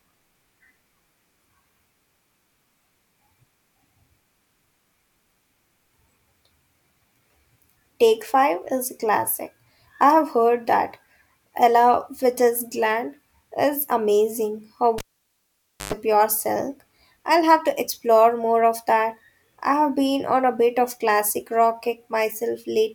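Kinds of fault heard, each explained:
Cable pulled and plugged in: at 14.98 s a pop cuts the speech for 0.9 s, then 50 Hz buzz lasting 0.11 s before "pure silk I'll have" returns.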